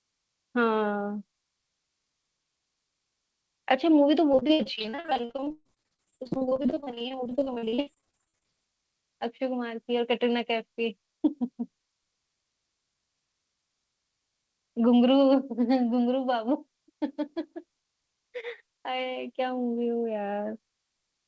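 From 4.32 to 8.46 s, repeated packet loss (robotic sound) chops the speech. Dozens of dropouts, the longest 130 ms, are patched by extending the previous sound, leaving nearly half the stretch concealed. A spectrogram shows smeared, repeated harmonic bands broken by gaps.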